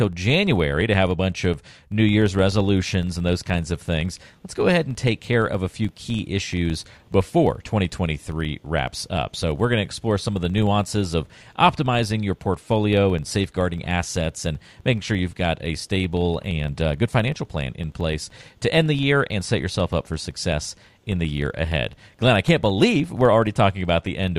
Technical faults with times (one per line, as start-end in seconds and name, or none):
0.00-24.39 filter restarted on every block